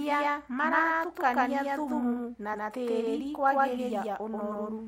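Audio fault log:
throughout: doubled audio track. The speech has most likely been captured a second time by a slower path, so a second full-band copy is mixed in roughly 150 ms behind the original at about the same level. Every syllable is repeated a fraction of a second later with no decay or room colour, giving a hard, stuttering slapback that smears consonants and makes the speech sound as though two identical voices are speaking out of step.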